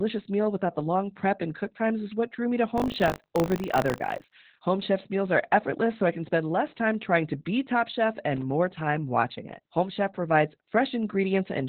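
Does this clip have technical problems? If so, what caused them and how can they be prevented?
Yes. Throughout, heavy Opus voice compression at about 8 kbps in SILK narrowband mode cuts everything above 4 kHz and coarsens the excitation, leaving speech muffled, hoarse and slightly robotic. A higher bitrate allowing wideband or fullband coding would prevent this.

From 2.76 to 4.36 s, just after "what drew me to", buffer tearing produces a 50 Hz buzz. A small slice of each buffer replays audio roughly 40 ms old, which fits a 20 ms buffer period. Larger buffers and correct writer-reader synchronisation would prevent it.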